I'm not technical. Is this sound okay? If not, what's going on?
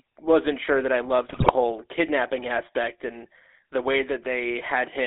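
No. The whole clip has the buzzy, gravelly roughness of an old mobile phone call, and it sounds thin, with nothing above about 3.6 kHz and little deep bass. That is the GSM full-rate codec, the original mobile phone speech system. It squeezes speech into a tiny amount of data by imitating the shape of the mouth and throat and feeding it simple regular pulses, and that shortcut leaves the rough, buzzy edge.

From 1.28 to 1.53 s, just after "wasn't sure that I", the speech breaks up into squawks, pops and gargling for about a quarter of a second. These are GSM bit errors, the kind of damage a weak mobile signal causes. Some of the data arrived corrupted, so the decoder rebuilt twelve short slices of sound with the wrong tone, pitch or loudness, and the speech briefly turned to noise before recovering.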